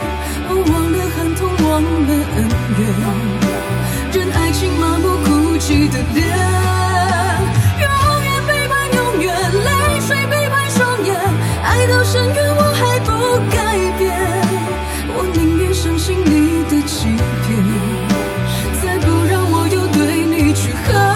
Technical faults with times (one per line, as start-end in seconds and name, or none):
0.00-21.16 channel delay (comb filtering)